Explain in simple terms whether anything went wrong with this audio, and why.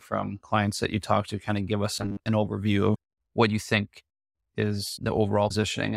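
Two problems can be heard, both in the delivery of the audio rather than in the recording itself.

Between 1.96 and 2.28 s, right after "to kind of give" and before "an overview", there is robotic sound from repeated short buffers. The likely cause is new audio arriving too slowly, so the player kept replaying its last tiny slice, about 10 ms long, for most of that stretch. Those rapid repeats lay a steady 100 Hz buzz over the speech, turning it flat and metallic while the real sound in between is lost.

The second problem is a broken MP3 bit reservoir, at 2.94 s (just after "an overview", before "what you think") and again from 5.49 to 5.51 s. MP3 files save space by letting each small chunk of audio lean on data stored in the chunk before it. When chunks go missing, which is the likely cause here, the next chunk reaches back and finds the wrong data. The result is a very short glitch where the sound skips forward, which fits chunks of about 24 ms.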